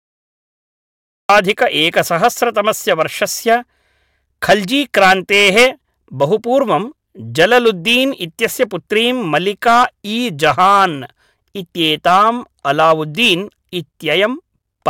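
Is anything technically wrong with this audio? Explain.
Yes. The clip has a cut-off start. From 0 to about 1.29 s there is digital silence, and at 1.29 s the speech enters abruptly in the middle of a sound rather than building from a natural onset. This happens when the recording or stream begins late, so capture starts after the talker is already mid-utterance. The result is a hard, truncated entry with no attack or fade-in.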